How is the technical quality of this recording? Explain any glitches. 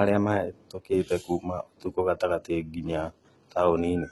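Technical quality is limited by heavy compression damage across the whole recording. For the full length of the speech, the top end stops at 11.8 kHz, and the treble that remains sounds artificial. S sounds come out gritty and lispy, with a metallic sheen. This is likely HE-AAC compression at a very low bitrate, roughly what 16 kbps would give. The codec keeps only the lower spectrum and synthesises the upper bands by copying lower content upward under a coarse envelope, so the high harmonics don't line up with the real ones.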